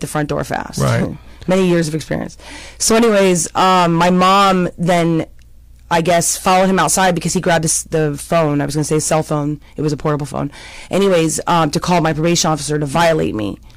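Hard clipping runs through the whole speech clip: the signal arrives about 15 dB hotter than a stage can pass, so around a tenth of the samples hit the ceiling and are cut flat. The flattened peaks add high harmonics, giving harsh fuzz on every loud syllable.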